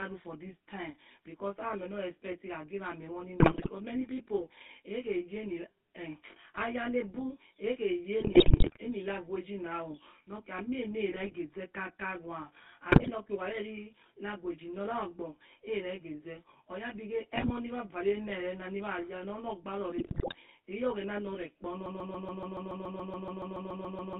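A speech recording carries two faults the whole way through, with a handful of timed faults on top. First there's channel delay (comb filtering): one side sits about 20 ms behind the other, and once they're folded to mono, everything common to both cancels at evenly spaced frequencies. The first notch lands around 30 Hz and the rest repeat regularly up the band, so the voice comes out rough and slightly doubled rather than clean.

Then there's the GSM full-rate codec sound, and the damage is plainly audible. The band is squeezed to roughly 150 Hz to 3.6 kHz, and the voice has that buzzy, gravelly edge you get when a pulse-driven vocal-tract model rebuilds speech from sparse excitation. It fits the old 13 kbps full-rate coder.

On top of that come GSM bit errors in six bursts: 3.40 to 3.69 s (right before "many people"), 8.20 to 8.78 s, 11.12 to 11.34 s, 12.92 to 13.10 s, 17.36 to 17.51 s and 19.96 to 20.35 s. 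Corrupted bits in the filter, pitch and gain values reach the decoder, so the spectrum bends and the level jumps frame after frame while each burst lasts. That's what turns the voice into squawks, pops and gargling.

Finally, a broken-record loop takes over from 21.86 s to the very end. A 0.14 s fragment repeats exactly, back to back, 16 times, and whatever should have played there is gone. The cause is likely a stall somewhere in the player, encoder or stream that kept resending the last chunk it held.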